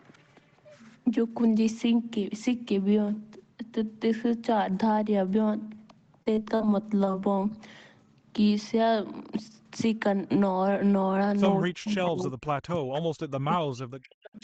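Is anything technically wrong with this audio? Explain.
Yes. There are several faults.

From 5.76 to 5.78 s, 6.22 to 6.27 s and 6.35 to 6.38 s there is short concealed packet loss. Between 10 and 40 ms of audio never arrived in time each time. The receiver extended the preceding sound to cover each hole, leaving brief smears or wobbles.

From 6.55 to 6.61 s there is a burst of packet loss. About 50 ms went missing in a row. The receiver stretched the last sound and let it fade, so a held buzz or hiss replaces the missing stretch before the speech resumes.

From 7.05 to 7.38 s there is repeated packet loss, heard as robotic sound. Four separate gaps, the longest 21 ms, were patched one after another. Roughly a fifth of this span is synthetic fill, so the speech turns choppy.

From 11.72 to 12.94 s and again from 13.27 s to the end, the speech drops away in pieces, by up to around 40 dB. The likely cause is speech suppressed in double talk. 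An echo canceller, unable to separate this talker from simultaneous far-end sound, turned the signal down.

The Opus call path also limits the audio to 8 kHz, with nothing above that.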